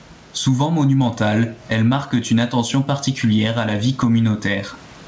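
Gain pumping runs through the whole speech clip. The gain swings by around 20 dB, so the levels feel squashed. The likely cause is gain set far too high with a fast limiter clamping it down each time. The room noise sits about 43 dB under the speech, and the band stops at 8 kHz, which fits a wideband call codec like G.722.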